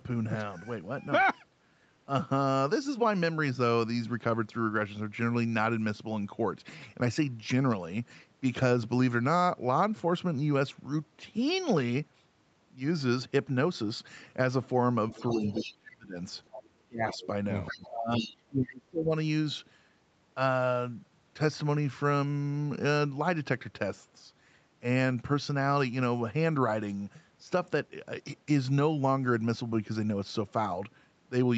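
From 15.12 to 15.74 s a faint second voice sits about 15 dB under the talker, the other side's voice leaking through, likely because the echo canceller left part of the loudspeaker signal in the microphone. It returns at 16.53–16.69, 17.11–17.27, 17.66–17.89 and 18.19–18.33 s, between about 10 and 20 dB down. On a spectrogram these bursts show as a separate set of harmonics overlapping the talker's.

Over the same stretch comes speech suppressed in double talk, at 15.13–16.16, 16.87–17.23 and 17.72–19.12 s. The canceller likely took the talker for echo while both spoke and pulled the signal down by up to about 30 dB. The waveform shows deep notches, and the spectrogram shows the energy in those stretches thinning out.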